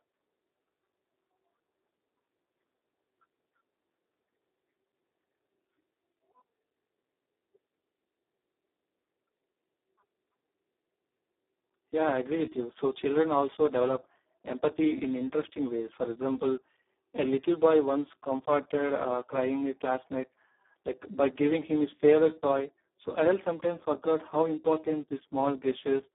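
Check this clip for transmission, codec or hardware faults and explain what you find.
One fault runs through the whole clip. Speex codec, throughout: heavy low-rate CELP coding, consistent with about 4 kbps, starves the excitation, leaving noisy, hoarse speech confined to 250 Hz–3.6 kHz, empty above 3.8 kHz.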